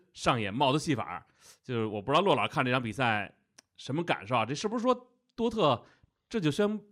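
No technical faults are audible.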